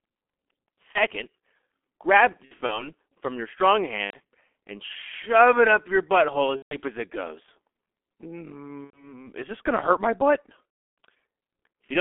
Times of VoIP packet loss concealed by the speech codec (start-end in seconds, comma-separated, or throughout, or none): 0.92-1.01, 2.45-2.92, 4.05-4.18, 6.56-6.77, 8.84-9.18, 10.70-10.97